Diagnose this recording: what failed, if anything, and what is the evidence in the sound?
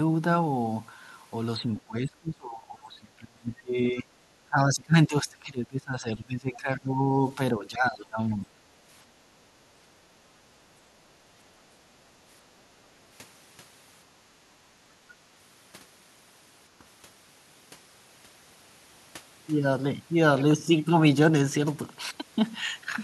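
Between 1.59 and 4.12 s, and again from 4.46 to 8.52 s, the speech sinks by roughly 30 and 20 dB and thins into fragments. This is likely speech suppressed in double talk in call processing: the echo canceller confused this talker with far-end echo and turned both down. Packet loss would leave short, abrupt gaps instead.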